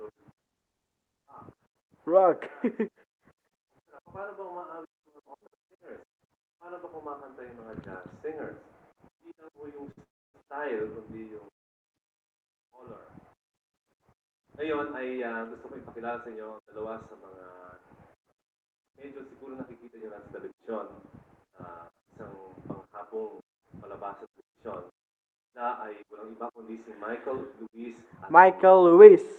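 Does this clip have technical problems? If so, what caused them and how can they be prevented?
Yes. The clip travels over a call link whose content stops near 12 kHz, which fits Opus at around 32 kbps, and the faults come from the jitter buffer.

At 9.91 s a short stall from a late packet holds the last sound for about 58 ms, until the packet arrives and playback resumes where it left off. On a spectrogram the harmonics run flat and unchanged for that stretch. In the waveform it appears as a few identical repeated cycles, often dipping slightly in level. A larger jitter buffer margin, or a steadier network path, prevents this.

Two call audio freezes run from 10.03 to 10.36 s and from 11.54 to 11.86 s, each lasting about 0.3 s. Each begins with a brief buzzing continuation that fades into near-silence, and then the audio picks up from the point where it stopped. The likely cause is packets held up in the network long enough for the buffer to empty. 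On a spectrogram each freeze shows as a smeared tail followed by a dark vertical band. In the waveform the trace is flat. Reducing network congestion and prioritising call traffic prevents these freezes.

From 12.39 to 13.36 s a jitter buffer slow-down plays the audio at about 97% speed without changing pitch. The receiver repeats single pitch periods, adding about 37 ms in total, so sounds are drawn out. On a spectrogram the harmonic tracks look stretched in time. In the waveform, short cycles repeat. Keeping the buffer's target delay stable, rather than letting it climb suddenly, prevents this.

From 22.88 s to the end, a jitter buffer speed-up plays the audio at about 105% speed, still at the same pitch, and hurries it. The receiver cuts short pitch-period pieces, roughly a third of a second in total, to work off a backlog of buffered audio. On a spectrogram events sit closer together, with tiny discontinuities in the harmonics. 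In the waveform some cycles are missing. Smoother packet delivery, so that packets don't arrive in bursts, prevents this.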